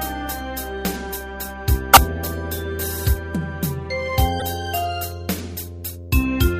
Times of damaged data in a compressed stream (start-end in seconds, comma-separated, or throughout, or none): 1.93-1.97, 4.40-4.42